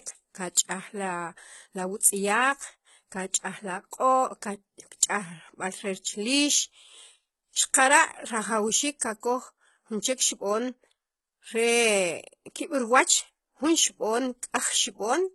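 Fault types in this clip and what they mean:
HE-AAC compression: The treble of this speech is likely rebuilt by spectral band replication from copied lower bands, so s sounds turn gritty and metallic. Heavy damage is consistent with about 16 kbps, and nothing is present above 11.8 kHz. Unlike plain lowpass dullness, the top stays bright but false.
pre-echo: At 3.91 s a brief hiss, spread over about 16 ms, comes just before a sharp attack and softens it. The codec's block-wide quantisation noise leaks into the quiet moment ahead of the onset. Unlike a click or dropout, the smear always precedes the transient rather than following it.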